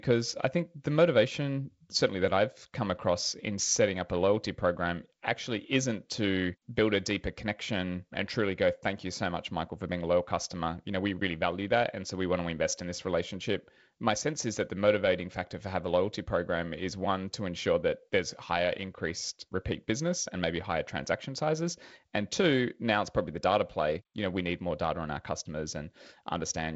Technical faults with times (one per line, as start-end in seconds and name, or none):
none